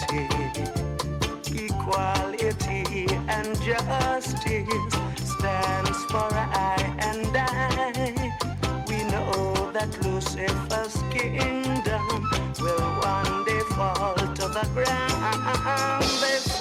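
No technical faults can be heard anywhere in the audio; the signal stays continuous and steady throughout.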